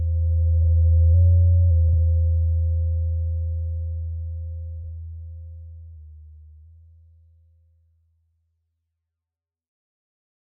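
At about 0.63, 1.89 and 4.79 s you get frames out of order: two neighbouring blocks swapped before decoding, roughly 24 ms each in the first case and 48 ms in the other two. Each stretch plays back scrambled, a brief garbled flutter, and no time goes missing.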